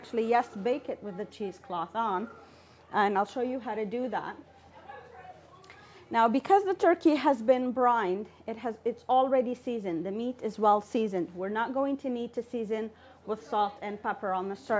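Nothing in the audio stood out as a technical problem on listening.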